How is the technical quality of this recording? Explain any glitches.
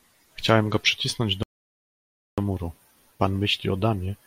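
The recording has one interruption. From 1.43 to 2.38 s there is a playback stall: the player likely ran out of data, so the speech drops into silence for 0.95 s before resuming.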